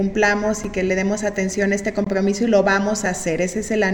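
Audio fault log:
0.64 s, 2.05 to 2.07 s, 3.06 s: block of digital silence. Runs of samples were replaced by zeros (5 ms, 20 ms and about 3 ms), a sign of buffers not filled in time. Sound drops out and returns without fades. The short ones tick; the 20 ms one is a brief hole.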